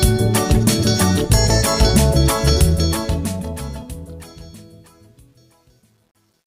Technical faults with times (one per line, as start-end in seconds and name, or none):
2.59-6.47 truncation distortion on a fade